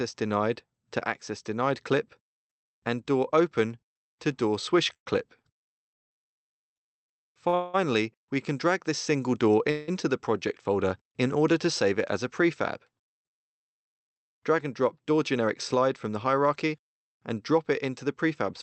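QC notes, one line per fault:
4.93 to 6.13 s, repeated stalls (stutter). The flow halts three times in this span, with about 338 ms of filled-in sound in total and the longest hold at 185 ms. The receiver's jitter buffer kept running dry, so it extended the last sound each time. Nothing is lost, but the audio drags and stumbles.
7.48 to 7.55 s, short stall from a late packet. One packet missed its slot, and the receiver stretched the preceding sound by 46 ms until the packet arrived. Playback then resumes from the same point. The result is one briefly held sound with a slight buzz or dip, with nothing skipped.
7.55 to 7.76 s and 9.71 to 9.90 s, call audio freeze. The sound holds as a fading buzz or hiss for 191 ms and then 166 ms, without ever dropping to silence. The likely cause is packets held up in transit, leaving the buffer empty. Playback then continues where it stopped, adding a gap.
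13.68 to 16.75 s, jitter buffer speed-up. The audio plays at about 105% speed with pitch unchanged, for a total of roughly 150 ms removed. The buffer held more than it needed, so the receiver trimmed many tiny pitch-period slices. This section sounds hurried. The audio passes through an Opus call codec, with the top limited to 8 kHz.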